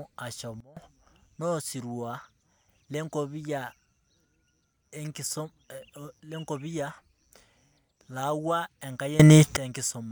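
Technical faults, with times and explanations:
0.60–0.77 s and 9.20–9.57 s, sudden gain jump: the speech and its background noise drop together by about 20 dB, then later rise by about 21 dB, each change landing abruptly rather than fading. This is likely a gain setting applied instantly, with no ramp.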